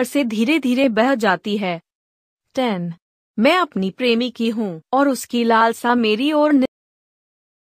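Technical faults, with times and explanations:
6.66 to 7.60 s, cut-off end: the speech stops dead at 6.66 s, in the middle of a sound, and the rest of the clip is flat digital silence. There's no natural decay or room tail, just an instant drop to nothing. That's what you get when the final buffers never reach the output: whatever was still queued is lost, so the signal is chopped off and the remaining time is empty.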